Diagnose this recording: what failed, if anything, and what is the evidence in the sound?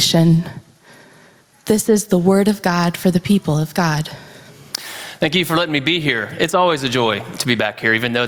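Gain pumping runs through the whole speech recording, with a gain swing of around 15 dB, and loud and soft passages sit unnaturally close in level. On a waveform the peaks look flattened. The likely cause is input gain set far too high, with a fast limiter or compressor clamping down on each loud sound.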